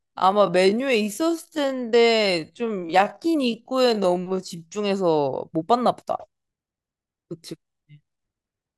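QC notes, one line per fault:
0.00–4.72 s, time-stretched section: the speech runs at about 0.63 times its natural pace here, yet the pitch doesn't drop, and then it snaps back to normal tempo at 4.72 s. That slowed stretch drags, as if each syllable is being drawn out. It's likely a tempo tool padding the audio to fill a length, repeating short slices to lengthen it while holding pitch steady.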